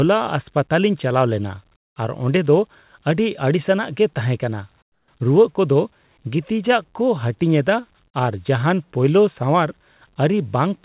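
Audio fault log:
1.76–1.96 s and 4.82–5.08 s, comfort noise in place of the background: transmission likely paused during these silences after "ᱪᱟᱞᱟᱣ ᱞᱮᱱᱟ" and "ᱜᱮ ᱛᱟᱦᱮᱸᱠᱟᱱᱟ". The receiver filled the 200 ms and 260 ms gaps with synthetic noise, so the real background turns into a flat, featureless hiss, about 18 dB and about 14 dB quieter, until speech returns.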